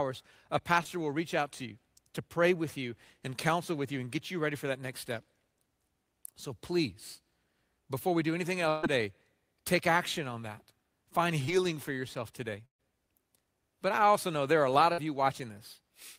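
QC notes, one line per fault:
0.83–0.87 s, short concealed packet loss: just before "will reach out to", about 20 ms of the call arrived too late and was filled by extending the previous sound, heard as a brief smear. On a spectrogram, the last sound runs on for a moment, then blends back.
8.69–8.85 s, 12.65–12.81 s (after "for yourself today"), 14.93–15.00 s (after "there are a lot"), burst of packet loss: runs of 140, 140 and 60 ms were lost. The receiver continued the last sound and turned it down, fading to about 110 ms of flat silence in the second burst, then resumed further on with audio missing.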